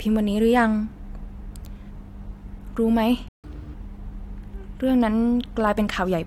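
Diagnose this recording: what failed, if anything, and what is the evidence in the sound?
The speech cuts out abruptly at 3.28 s and stays silent until 3.44 s, a gap of about 150 ms, before resuming. This is a playback stall at the playback stage, in the player's buffer. The output simply had nothing to render for that stretch, most likely because the buffer ran dry or the playback thread was blocked. The clean silence points to the player.

From 3.44 s to 3.74 s the speech runs hurried and noticeably higher, then snaps back to normal speed and pitch. This is catch-up at higher speed, also at the playback stage. Having fallen behind during the stall, the player resampled its backlog at 1.5 times normal speed. Because resampling moves tempo and pitch together, the pitch rose by roughly seven semitones. The roughly 300 ms burst recovers the 150 ms lost in the stall.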